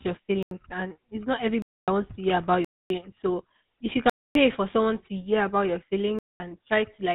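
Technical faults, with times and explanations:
Throughout: GSM full-rate codec. The speech carries a plainly audible buzzy, gravelly roughness. Nothing is heard above about 3.8 kHz, so the sound is dull and boxy. The codec models the vocal tract as a filter. It drives that filter with a regular train of pulses, keeping only every third excitation sample. At 13 kbps this coarse rebuilding of the voice produces the rasp, and the narrow band strips the top end.
0.43–0.51 s, 1.62–1.88 s, 2.65–2.90 s, 4.10–4.35 s, 6.19–6.40 s: block of digital silence. The audio drops abruptly to total silence and returns with no fade. The first hole is 85 ms, ending just before "and it's not", and its length fits a 4096-sample block. The second follows "and it's not" and runs 256 ms up to "wants to hear about". The third is also 256 ms. The fourth, 256 ms, sits between "if you" and "for someone to hear". The last is about 212 ms. 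Whole runs of samples were replaced by zeros.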